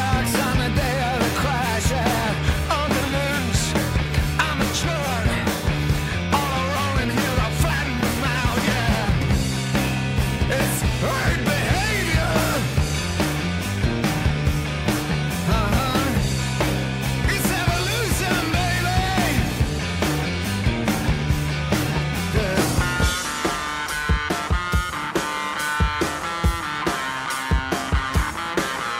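No technical faults are audible.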